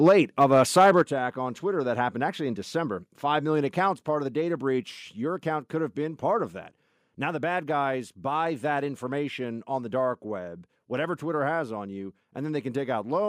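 From 0.05 to 0.13 s and again from 0.41 to 1.02 s, microphone overload flattens peaks about 3 dB over full scale, adding a harsh crackle, likely from excessive input gain. At 1.02 s, just before "attack on", the microphone volume steps down by about 7 dB, an abrupt level drop likely caused by automatic gain control.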